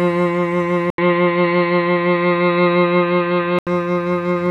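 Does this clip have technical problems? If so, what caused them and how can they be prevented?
Yes. The input likely switched to a poorer device from 0.90 to 3.67 s. An 80 ms gap, then dull music cut above 4.4 kHz, level shifted about 5 dB, with new noise about 40 dB down. Locking the recording input to one device prevents this.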